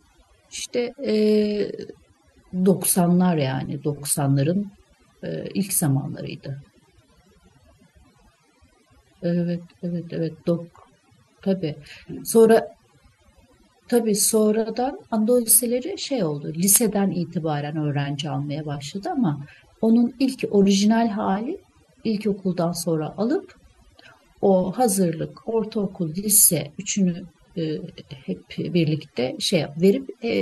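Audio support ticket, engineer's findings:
Overdone noise removal, whole clip. Background drops between phrases, with twinkling specks. Speech loses quiet detail. Probable component: noise suppressor set too aggressively, gating individual frequency bands near its noise estimate and taking low-level speech content with them.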